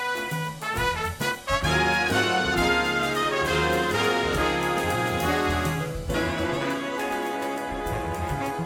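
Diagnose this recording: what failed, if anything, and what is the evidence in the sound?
Nothing failed in this music recording, and no stage shows a fault. No working path is listed to comment on, so there is no further evidence to point to in the sound.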